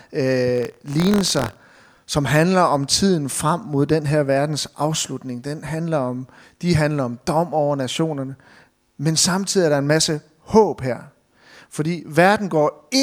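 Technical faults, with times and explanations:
0.53–1.97 s, buffer tearing: a robotic 43.1 Hz rattle rides the speech until just before "som handler om tiden". The ring buffer's writer and reader have slipped, so a sliver of each period holds audio about 50 ms old, hard-spliced in; the 43.1 Hz rate fits a 1024-sample buffer.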